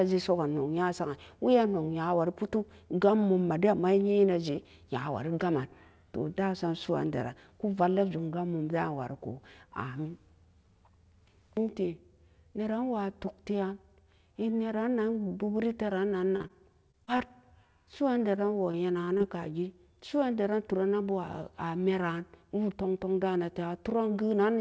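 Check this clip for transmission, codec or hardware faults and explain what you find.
Packet-delivery faults cluster between 16.36 and 19.22 s; the wideband call path itself shows only its normal band limit, with nothing above 8 kHz.

Short concealed packet loss at 16.36–16.42 s and 16.42–16.46 s: about 40 ms, then 20 ms, went missing. The decoder extended the preceding sound, leaving a brief smear.

Short stall from a late packet at 16.48 s: the jitter buffer emptied, so the last sound was held about 16 ms, with a slight buzz or dip, before continuing without loss.

Repeated packet loss (robotic sound) at 16.91–17.31 s and 18.35–19.22 s: four gaps in each stretch, the longest about 20–23 ms, each patched by continuation, producing choppy sound with pieces missing.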